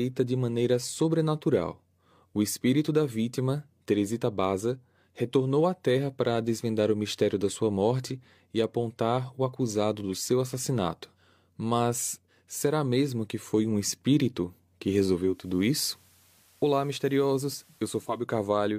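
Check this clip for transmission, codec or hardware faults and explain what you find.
One fault is present. Digital radio blending to analogue runs from 15.2 to 18.29 s, just after "foi um espírito que". The receiver lost its digital stream and cross-faded over about 0.3 s to the station's FM signal. The speech drops about 1 dB, and hiss comes up, roughly 35 dB down.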